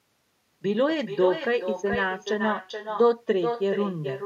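The speech carries an echo with no canceller throughout: each phrase returns roughly 400 ms later, about 7 dB quieter and thinner. The far end's loudspeaker feeds its microphone unchecked. Unlike reverberation, this is a distinct delayed repeat rather than a smeared tail.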